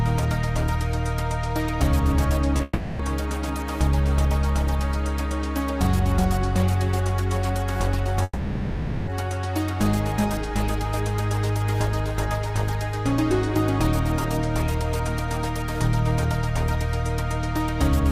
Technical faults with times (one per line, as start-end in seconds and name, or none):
2.57-2.61 short concealed packet loss
2.63-3.01 long network dropout
8.23-9.09 long network dropout